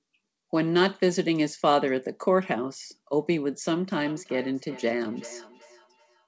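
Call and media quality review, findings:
Speech returns at a steady interval of roughly 0.4 s from 4.06 s to clip end (6.27 s), thinner and ringier each pass, peaking about 21 dB below direct speech. Probable component: second device in same room. Feedback echo between two devices: its loudspeaker replays the call, the first microphone recaptures it, and neither echo canceller removes the other device's playback. Band ceiling at 8 kHz from the G.722 call path.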